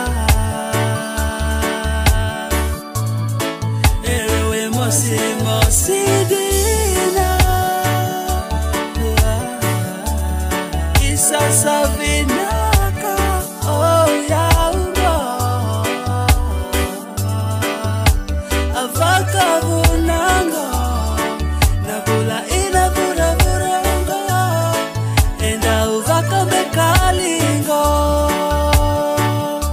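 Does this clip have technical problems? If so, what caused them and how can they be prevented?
No technical problems are audible.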